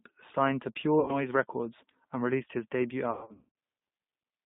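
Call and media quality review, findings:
G.729 codec throughout: rough, slightly synthetic speech, band limited to about 150 Hz to 3.7 kHz. Pulse-based CELP coding at what sounds like 8 kbit/s G.729A, damage plainly audible.

VoIP packet loss concealed by the speech codec at 1.00 to 1.17 s (about 80 ms lost) and 3.11 to 3.49 s (340 ms lost over 440 ms, longest gap 120 ms). The decoder stretches the last pitch and filter into fading buzz or coloured noise, and the voice stays weak briefly after packets return.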